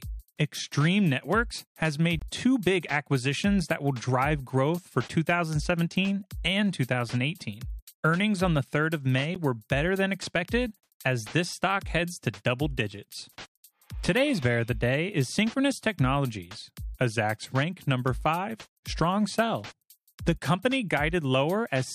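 At 2.19 to 2.22 s the sound drops out for about 23 ms. This is a block of digital silence. The samples are zeroed, and the signal stops and restarts with no fade. It reads as a short hole. A second dropout comes at 9.35 s, lasting about 12 ms, and is heard as a tick. The lengths fit buffers of 1024 and 512 samples that the program failed to fill in time.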